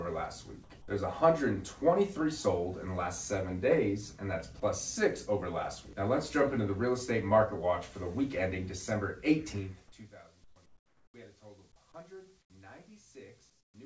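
At 0.64–0.70 s and 4.60–4.62 s, brief bits of sound drop to steady hiss, likely sound dropped by the voice detector mistaking it for background. From 10.44–10.56, 10.66–11.14, 12.42–12.50 and 13.50–13.74 s, the real background turns featureless and about 5 to 11 dB quieter, likely comfort noise in place of the background.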